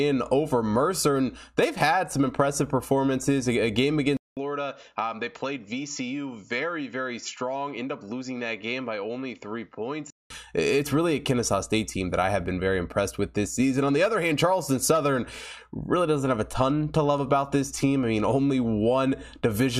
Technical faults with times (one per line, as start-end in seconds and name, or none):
4.17-10.30 input switched to a poorer device